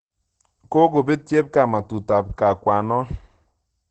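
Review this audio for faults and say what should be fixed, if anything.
Opus compression, throughout: the speech sounds muffled and hoarse, with nothing above 8.6 kHz, likely from Opus's speech mode at a rate near 12 kbps. Encode at a higher bitrate so the codec keeps full bandwidth and avoids its narrow speech mode.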